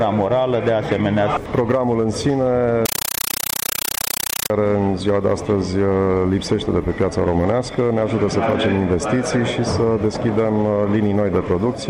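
From 2.86 s to 4.5 s the sound gives way to harsh, very loud chattering static, a rapid rattle repeating 31.25 times a second, each burst about 8 ms long with silence between. This is a compressed stream played as audio: an AC-3 (Dolby Digital) bitstream reached the output as if it were ordinary samples and was never decoded, so each data frame came out as a noise burst followed by zero padding. The density suggests a 384 kbps stream.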